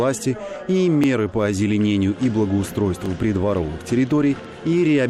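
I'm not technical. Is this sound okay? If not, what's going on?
No. Overlapping chunks at 1.04–1.06 s and 3.06–3.08 s: the sound was handled in 2-second pieces that each begin slightly before the previous one ends, so a 20-millisecond sliver plays twice at each join, heard as a brief click or stutter.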